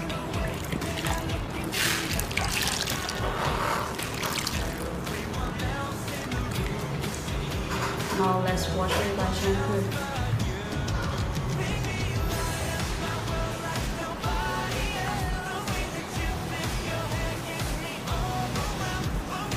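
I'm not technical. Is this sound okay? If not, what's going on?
No. From 1.35 to 5.51 seconds there is a block size mismatch (padded). One stage sends chunks too short for the next, so silence fills each gap. That makes a low buzz, about 38 times a second. The sound also slows to 0.89 speed, with its tone kept.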